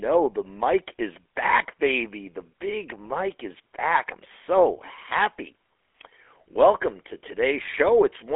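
From start to finish the speech carries GSM full-rate codec damage, plainly audible as a buzzy, gravelly roughness. The codec rebuilds the voice from a vocal-tract model driven by sparse regular pulses. On a spectrogram, energy stops at 3.8 kHz, with a weakened band below 300 Hz.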